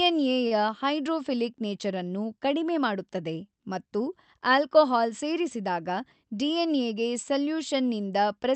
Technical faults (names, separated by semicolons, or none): short stall from a late packet; jitter buffer speed-up